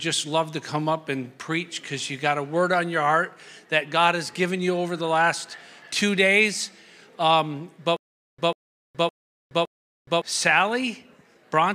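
From 7.97 s to 10.22 s the audio breaks into a stutter with silent gaps. A fragment about 144 ms long plays, then drops to digital silence for about 419 ms, and the same fragment returns four times at a steady 563 ms period. The likely cause is a stalled player or stream that replays its last buffered fragment on each retry and then runs dry, so the audio that belonged in that stretch never plays.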